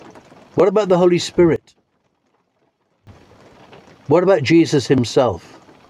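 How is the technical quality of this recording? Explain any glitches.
The recording has one clear glitch. From 1.56 to 3.07 s the sound collapses by about 21 dB to a faint residue, then returns. The likely cause is one channel inverted: with reversed polarity, centred content cancels in mono. Unlike a dropout, a difference signal remains rather than silence.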